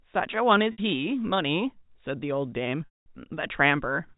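At 0.72 s and 2.85 s, packet loss with pitch repetition: the 60 ms gap sounds like a briefly held buzz, while the 210 ms gap fades to silence before the speech cross-fades back. A plain dropout would cut to silence instantly.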